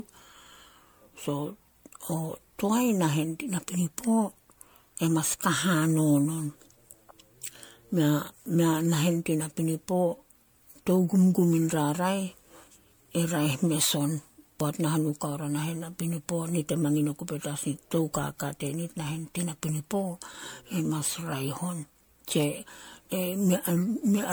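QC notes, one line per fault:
Throughout, generation loss: the speech sounds swirly, smeared and hollow, and consonant attacks blur. Each re-encode quantises on a shifted frame grid, so noise and spectral holes stack up. The likely cause is around seven passes through MP3, consistent with 96 kbit/s.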